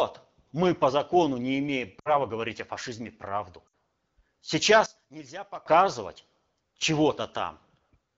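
Around 1.99 to 2.19 s, right after "по закону не имеем", there's a burst of lost AMR speech frames. About 60 ms of data went missing, which fits three 20 ms frames. The decoder stretches the last good pitch and vocal tract shape with falling gain, so the sound smears and sags before "говорить о фашизме правду" comes back a bit rough. It happens again at 3.67 to 3.74 s, just after "говорить о фашизме правду", with another 60 ms gap and the same quick fade to near silence.

From 4.86 to 5.66 s the level drops by about 17 dB and the speech shrinks to a faint leftover copy. That's the classic sign of one channel inverted: the common centre cancels when the two channels are summed to mono. Polarity reversal is the likely cause.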